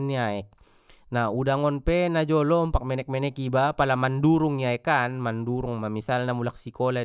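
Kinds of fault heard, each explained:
No faults turn up anywhere in this recording, so there's nothing to list here.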